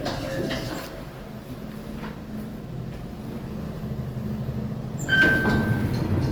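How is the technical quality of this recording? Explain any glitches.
The technical quality is limited by one fault that runs through the whole clip: Opus compression. The sound turns grainy and rough, with a noisy sheen on tonal parts. This likely comes from Opus in its music mode at a low rate, one that fits about 24 kbps. Short of bits, the encoder keeps each band's energy but fills the detail with folded or noise-like content. Full bandwidth survives, reaching about 20.1 kHz.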